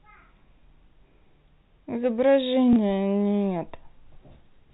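Packet loss with last packet repeated occurs at 2.73 to 2.76 s: about 30 ms went missing, which fits a single lost packet, and the receiver replayed the previous chunk to fill the gap. The single repeat sounds like a small blip in the G.711 telephone-band sound.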